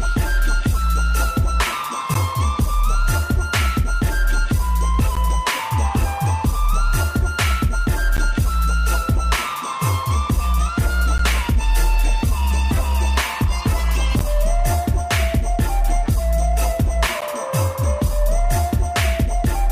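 At 2.14, 5.15, 8.17, 11.18, 14.19 and 17.21 s you get a gap between chunks, six short holes of about 13 ms each, spaced about 3 s apart. The audio was evidently delivered in 3-second blocks, and a sliver of silence got inserted at every join. Nothing's actually missing. The sound just drops out briefly at each join, short holes at regular intervals in the flow.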